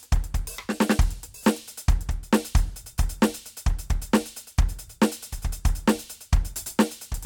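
No technical faults are audible anywhere in this music clip.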